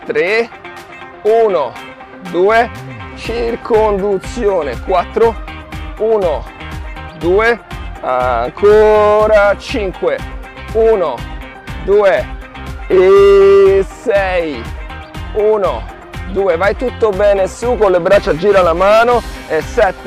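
No technical faults are audible anywhere in the clip.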